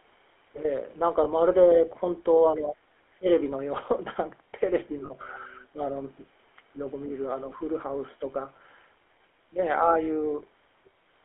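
Right through the clip you can hear the GSM full-rate codec: a buzzy, gravelly roughness on the speech, squeezed into a 300 Hz to 3.4 kHz line band, consistent with 13 kbps full-rate coding. At 1.24 to 1.27 s there's a lost GSM frame, about 20 ms where the decoder repeats the last good frame and gives a brief metallic ring. Around 3.18 to 3.26 s the speech dips sharply, somewhere near 25 dB down for roughly 70 ms, likely speech suppressed in double talk by an echo canceller ducking the talker. At 5.06 to 5.12 s more lost GSM frames cover about 40 ms, with a slightly longer rough, ringing smear.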